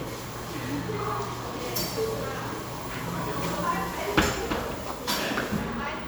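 Nothing in this recording of everyday sounds stood out as a technical problem on listening.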